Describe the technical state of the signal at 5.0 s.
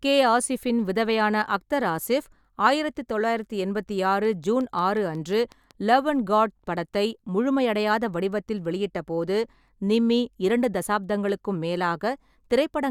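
At 5.0 s a train of clicks runs from 4.25 to 5.9 s, between "ஆயிரத்து தொள்ளாயிரத்து எண்பத்தி ஆறு" and "லவ் அண்ட் காட் படத்தை". About ten evenly spaced pops, 5.5 per second and near speech level, likely come from interference or a faulty connection or power supply. They appear as thin vertical spectrogram lines and sharp waveform spikes.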